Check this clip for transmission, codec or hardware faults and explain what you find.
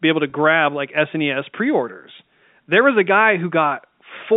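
One fault turns up on this G.711 telephone line. Packet loss with pitch repetition occurs at 0.30 to 0.32 s, just after "be able to". About 20 ms of signal went missing, which fits a single lost packet. The receiver bridged the gap by repeating the last pitch period, so the moment sounds like a briefly held, slightly buzzy note.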